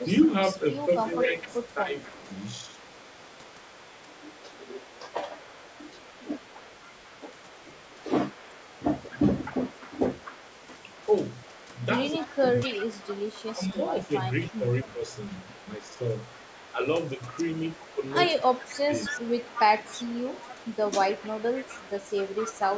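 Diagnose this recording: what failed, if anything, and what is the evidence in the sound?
Echo leak in the call processing: a faint copy trails the speech by 256 ms throughout, about 20 dB down. The fixed lag sets it apart from room reverberation, likely from a missed loudspeaker echo.

Speech suppressed in double talk, also in call processing: the level dips by up to about 15 dB at 1.04–1.96, 12.12–12.87, 13.54–15.14, 15.78–15.85 and 18.43–19.15 s. The audio is turned down rather than lost, unlike a network dropout. The echo canceller likely ducked both talkers.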